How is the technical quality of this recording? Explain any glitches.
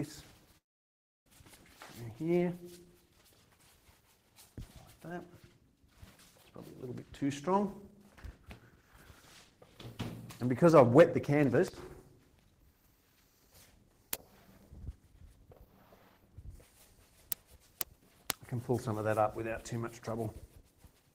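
There is one clear glitch, a long network dropout from 0.57 to 1.27 s. Most likely, the audio stream stopped arriving for about 0.69 s and the receiver had nothing real to play. It stretched the last sound into a fading buzz, and then the gap went to near silence for almost the whole stretch. When the audio resumes at 1.27 s it jumps ahead, and the lost portion is simply gone rather than delayed.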